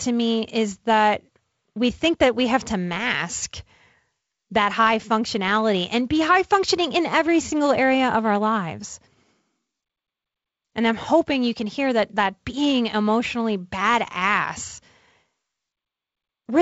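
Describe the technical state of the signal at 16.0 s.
At 16.0 s the speech is intact, with no fault present; it simply carries the character of the G.722 wideband telephone coding path it passes through, band-limited to about 7.7 kHz with the light codec hiss that coding at 48 kbit/s leaves behind.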